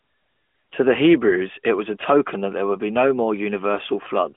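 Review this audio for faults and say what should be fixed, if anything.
No faults turn up in this audio, so nothing needs to be fixed.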